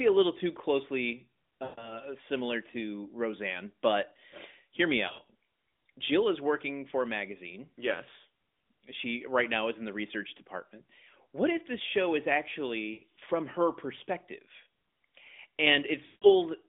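Lost AMR speech frames occur at 1.64–2.01 s, between "a little too closely" and "similar to"; at 5.08–5.31 s, after "but hear me", as scattered short dips; at 12.94–13.02 s, before "from her perspective"; and at 16.06–16.27 s. The decoder repeats the last good pitch and vocal tract settings at falling gain, so the narrowband speech smears, warbles and fades before recovering.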